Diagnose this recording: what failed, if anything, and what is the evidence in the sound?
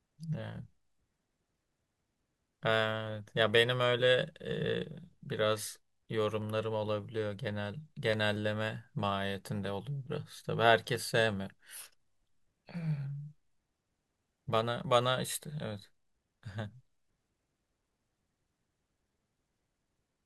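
Sharp single clicks at 6.42, 8.13 and 10.96 s in the speech. Likely dropped samples at the driver or buffer stage: a fraction of a millisecond missing, so the waveform jumps.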